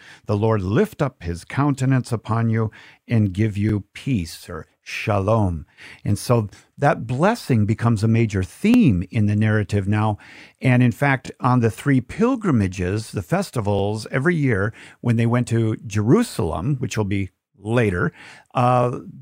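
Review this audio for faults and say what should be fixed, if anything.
Overlapping chunks: the speech was split into roughly 2.5-second chunks, and each new chunk restarts about 23 ms before the previous one finished. That repeated slice causes a brief stutter every 2.52 s, at 1.17, 3.69, 6.22, 8.74, 11.26, 13.79, 16.31 and 18.83 s. Fix this by advancing each chunk's start position by exactly the number of samples already output, so consecutive chunks meet end to start with no shared audio.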